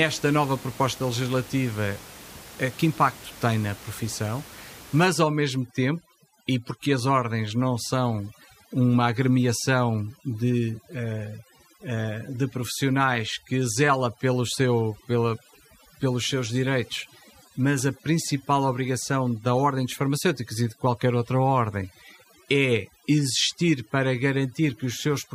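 From 5.07 s to the end, overdone noise removal sets in: a noise reduction stage is working far too aggressively, driving individual frequency bands down or off whenever they sit close to its noise estimate. The room noise, about 20 dB below the speech, drops and breaks up into twinkling specks, and the quieter parts of the speech are stripped away along with it.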